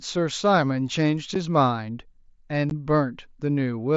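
At 1.35 s the speech drops out for about 7.5 ms, and at 2.70 s for about 15 ms, which fits one and then two lost headset frames. These are unconcealed Bluetooth headset packet losses: packets between headset and phone never arrived, and silence or an idle pattern sits in their place with hard edges on either side. Unlike concealed loss, nothing fills the gaps. The mSBC link adds a light grain on loud sounds.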